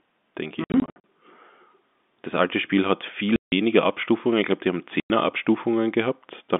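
Packet loss filled with silence breaks the speech three times: scattered dropouts from 0.64 to 1.04 s, the longest about 60 ms, then solid gaps at 3.36–3.52 s and 5.0–5.1 s. Gap lengths fit 20 ms packets. The receiver substitutes silence, so the gaps have hard edges.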